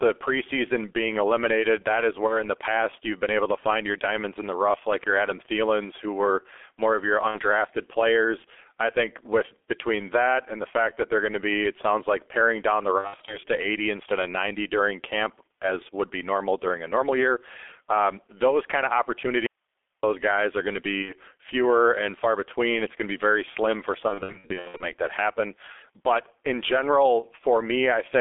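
Throughout, the speech carries heavy G.723.1 codec damage: the band sits around 300 Hz to 3.5 kHz, and at about 6.3 kbit/s the slow-updating voice model leaves it muffled and hoarse with smeared consonants, a steady colouring rather than anything that comes and goes.

VoIP packet loss concealed by the speech codec first appears at 2.27 s, where 30 ms is lost, consistent with one 30 ms frame. The decoder extrapolates from its last pitch and filter, so the sound is stretched into a fading buzz or coloured noise, then stays weak until about 2.39 s. It recurs at 7.28 s with 60 ms lost and at 12.98 s with 180 ms scattered over 300 ms.

At 19.46 s the signal drops abruptly to faint hiss, roughly 50 dB below the speech, for 0.57 s until 20.03 s. This is likely an audio dropout to a faint residue. Unlike concealment, nothing is synthesised and no buzzy tail follows.

Packet loss returns at 21.02 s with 60 ms lost, and at 24.08 s, where 420 ms is lost in runs of 60 ms at most, scattered over 720 ms. 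The result is a stretch of repeated, decaying concealed fragments.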